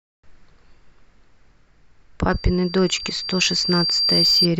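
From 2.30 s to 4.48 s a thin, piercing tone at 4.7 kHz swells over about two seconds until it sits a few decibels above the speech: loudspeaker feedback squeal. The microphone is hearing its own loudspeaker, and at that frequency the loop gain exceeds one, so the tone keeps feeding itself.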